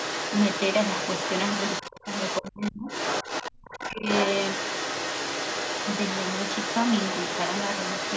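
From 0.0 to 2.71 s a second, fainter voice runs under the speech at around 5 dB below it: the other side's voice leaking through. The likely cause is an echo canceller that left part of the far-end loudspeaker signal in the microphone feed. The residue is close enough in level to compete with the talker, and it is confined, like the rest of the audio, below 8 kHz by the call's microphone processing.

Within that stretch, from 1.88 to 2.07 s, the talker's speech dips by roughly 20 dB. This is speech suppressed in double talk, likely caused by the canceller failing to separate near-end speech from echo while both sides were active and attenuating everything. A deeper cut follows from 2.41 to 2.88 s, reaching about 35 dB, so the speech drops away almost entirely for close to half a second.

The leakage returns from 2.87 to 3.51 s at the same level, roughly 5 dB under the speech, again likely from incomplete echo cancellation. 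Right after, from 3.51 to 4.06 s, double-talk suppression is at its strongest, pulling the speech down by about 40 dB for around 400 ms. At that depth the talker becomes effectively inaudible.

From 3.69 s to the end at 8.16 s, the far-end voice leaks through, sitting about 5 dB below the talker. The likely cause is the same residual loudspeaker echo.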